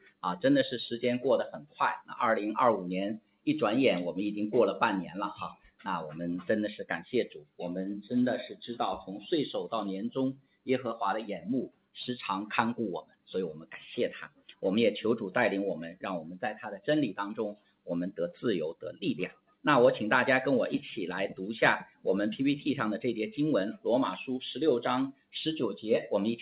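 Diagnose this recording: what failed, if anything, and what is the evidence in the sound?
Sound cut by the noise suppressor at 3.2–3.47, 14.3–14.55, 17.56–17.87 and 19.32–19.64 s: call processing misread the sound as noise and pulled it down by about 10 to 12 dB.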